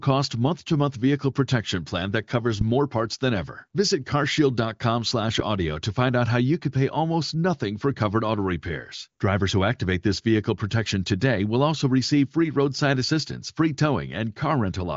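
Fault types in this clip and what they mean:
No faults are present.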